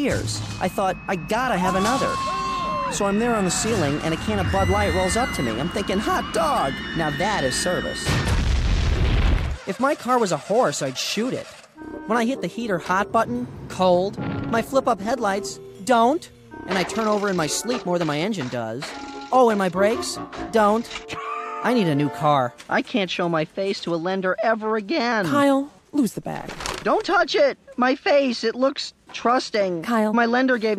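Twice the audio abruptly slows by about 6% and drops in pitch by about 107 cents, roughly a semitone flat, first from 2.94 to 3.72 s and again from 25.12 to 26.90 s, returning to its original rate after each. Speed and pitch move together, which points to a drift correction step: the likely cause is clock-matching software resampling in one coarse jump to rebalance its buffer, far larger than such corrections should be.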